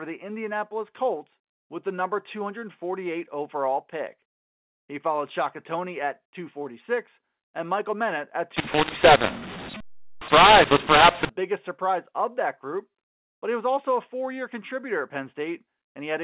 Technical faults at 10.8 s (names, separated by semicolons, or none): mu-law and A-law mixed up